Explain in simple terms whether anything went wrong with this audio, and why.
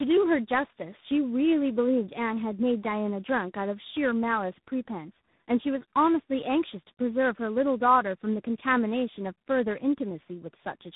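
Tandem speech coding runs through the whole clip: the call passed through two different phone-network speech coders, one after another, each squeezing the already-damaged speech again. That leaves speech rough, muffled with nothing above 3.8 kHz, and warbly.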